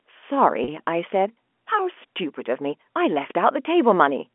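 Packet loss with pitch repetition occurs from 0.64 to 0.68 s, where about 40 ms of the speech is missing, which fits two 20 ms packets dropping out. The receiver filled the hole by repeating the last pitch period it had, so instead of a gap there is a brief held, slightly buzzy tone that sustains unnaturally before the speech resumes. This happens within the narrow telephone band of the G.711 line, about 250 to 3400 Hz.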